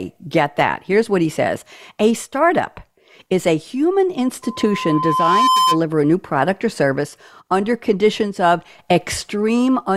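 A speech recording in which, from 4.42 to 5.81 s, a steady 1 kHz tone swells over about a second until it sits a few decibels above the voice. This is loudspeaker feedback squeal: the microphone picked up its own loudspeaker, and the loop gain at 1 kHz exceeded one.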